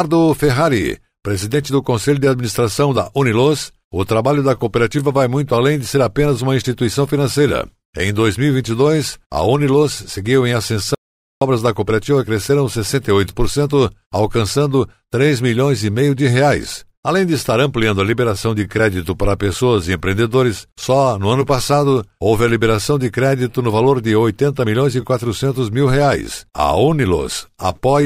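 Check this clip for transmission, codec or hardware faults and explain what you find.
One fault stands out: an audio dropout to silence in the speech. From 10.95 to 11.41 s, about 0.47 s, right after "seguiu em" and before "da cooperativa cresceram", the sound stops dead mid-flow and returns just as abruptly. The likely cause is a brief loss of the input signal while the recorder kept writing silence. That separates it from a natural pause, which would keep the room tone; here the gap is empty, and whatever was spoken in it is lost.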